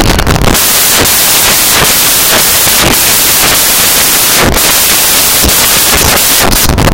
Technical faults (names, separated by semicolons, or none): samples built from the wrong bytes